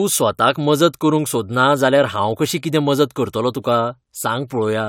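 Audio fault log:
No audible faults on the speech track at any point.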